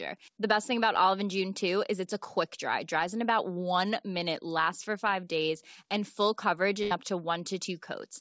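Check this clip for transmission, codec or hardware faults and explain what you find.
One transmission fault stands out. From 6.83 to 6.93 s, between "days and full coverage" and "up to", the sound smears into a held, fading sound before jumping ahead. This is a burst of packet loss: the receiver stretched the last received sound for about 78 ms while turning it down, and roughly 80 ms of speech never arrives. The G.722 call path carries nothing above 8 kHz throughout.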